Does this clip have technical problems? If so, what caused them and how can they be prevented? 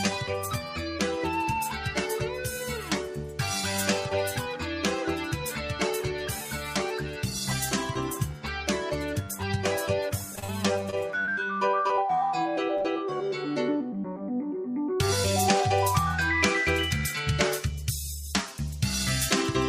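Yes. A noise suppressor tuned for speech was left running on sound it wasn't built for, so it treats steady parts as noise and swings the level by roughly 5 dB, making the audio pump and thin. Bypass speech noise suppression, or switch to a music mode, whenever the source isn't speech.

The same noise suppressor cut sound at 0.44–0.78, 2.26–2.46, 2.8–3.39, 6.41–6.75 and 7.02–7.23 s. Sustained material dips by about 4 to 8 dB, deepest around 2.8–3.39 s, while sudden onsets pass. Disabling the suppressor for non-speech material prevents these dips.

Repeated packet loss from 10.35 to 11.99 s left several holes, the longest about 40 ms. Patching each by extending the previous sound leaves choppy, robotic audio with fragments missing. A steadier network path, or forward error correction, would keep those packets arriving.

A short stall from a late packet drained the jitter buffer at 12.77–12.82 s, and the receiver held the last sound for about 31 ms before resuming, with nothing lost. 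A slightly deeper jitter buffer would absorb that delay.

Short concealed packet loss follows at 12.82–12.86 s. About 20 ms never arrived and was filled by continuation, giving a brief smear. Better link reliability or redundancy in the stream would prevent it.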